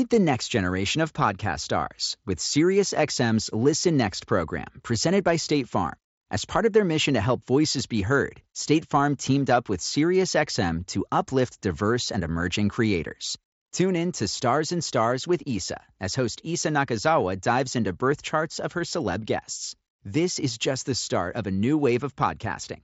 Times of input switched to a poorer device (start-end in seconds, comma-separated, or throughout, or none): none